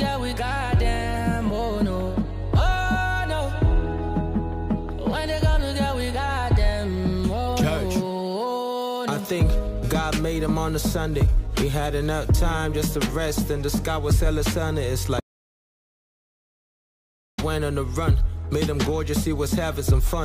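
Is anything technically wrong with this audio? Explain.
Yes. From 15.20 s to 17.38 s there is an audio dropout to silence lasting about 2.18 s. The sound stops abruptly mid-flow and resumes just as abruptly, and the gap is silent with no room tone or noise floor underneath. That points to the input signal being lost while recording or encoding continued, most likely from a disconnected device, a failed link or an accidental mute, so anything in that span is gone.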